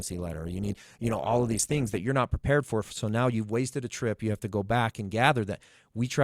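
From 0.0 to 2.0 s, an adaptive stream starting at a low bitrate dulls and smears the speech until the player steps up; the spectrogram's top edge then jumps higher, with no waveform gap.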